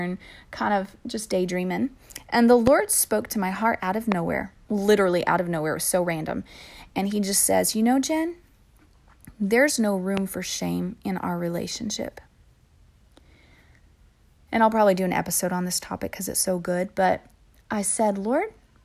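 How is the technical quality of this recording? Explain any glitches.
The speech is interrupted by three loud pops, at 2.67–2.69 s, 4.12–4.14 s and 10.17–10.20 s. Each is a single sharp hit lasting about 20 ms and peaking around 15 dB above the speech, which carries on underneath. The likely cause is a brief voltage spike from something like a connector, a switch, static or a driver hiccup, which the downstream circuitry turns into a short click-thump laid on top of the audio.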